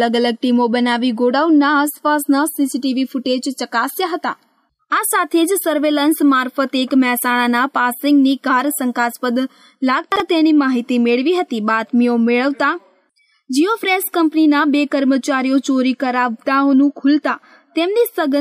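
At 10.12 to 10.2 s the sound briefly jumbles: chunks out of order. One 40 ms chunk plays a chunk late, swapped with its neighbour, leaving three hard joins. Unlike a dropout or a repeat, nothing goes missing or plays twice.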